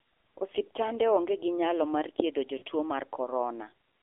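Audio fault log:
Throughout: AMR narrowband mobile codec. The speech is band-limited to roughly 250 Hz to 3.4 kHz with nothing above 4 kHz, and at a rate that sounds like 7.4 kbps the pulse-driven vocal tract model leaves a plainly buzzy, synthetic tone. A spectrogram shows a hard ceiling near 4 kHz and smeared harmonics.
2.58 to 2.63 s: lost AMR speech frames. Just after "onge ginyalo mar thiedho", about 40 ms, or two frames, failed and the decoder repeated its last pitch and vocal tract settings at falling gain. This gives a brief dip or warble. The waveform shows a short sag in amplitude, and the spectrogram shows a stretch of frozen, fading harmonics.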